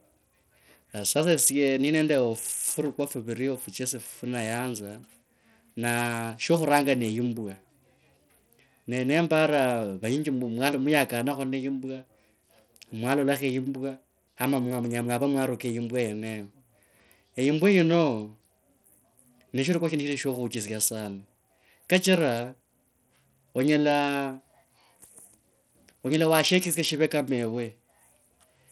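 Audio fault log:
throughout: Bluetooth SBC compression. The speech carries plainly audible codec damage, with flickering treble, gritty grain and nothing above 18.1 kHz. The likely cause is SBC with a small bit pool that starves the upper sub-bands, which fits roughly 80 kbps.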